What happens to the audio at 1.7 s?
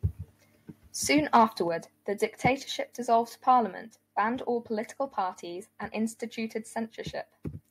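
Right around 1.68 s the whole recording drops in level in a single step, by about 5 dB. The voice and the background noise behind it get quieter together, all at once, with no gradual fade. That pattern is the signature of a microphone volume stepped down, likely the call software deciding the input was running too hot and pulling the device's input gain lower in one move.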